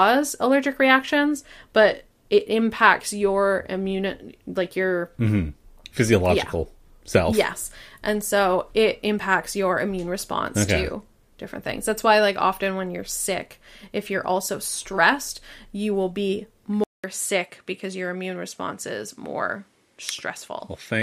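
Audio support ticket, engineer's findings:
Speech goes dull and quieter from 16.84 s, after "stressed you will be", to end. 0.2 s gap at switch. Likely input switched to a poorer device: narrower band, nothing above 12.6 kHz, about 5 dB lower, faint noise floor.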